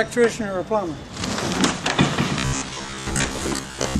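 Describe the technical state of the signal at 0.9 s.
The signal is intact at 0.9 s, with no audible fault at that moment.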